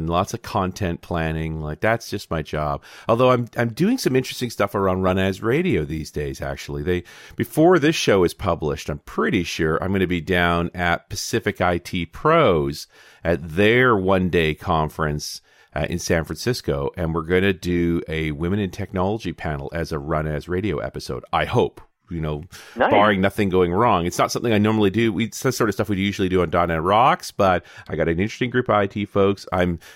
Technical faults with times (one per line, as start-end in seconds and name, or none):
27.47-29.47 de-emphasis applied wrongly